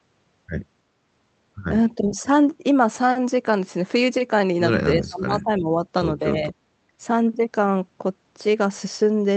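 A speech clip carried over a band-limited call link, topping out around 8 kHz. The talker gets pulled down in three spots: a mild dip of about 10 dB from 1.96 to 2.16 s, a deep one of roughly 25 dB from 4.98 to 5.69 s, and a slight one of about 5 dB from 6.32 to 6.54 s. That pattern is most likely speech suppressed in double talk, with the echo canceller ducking the talker while the far end is speaking.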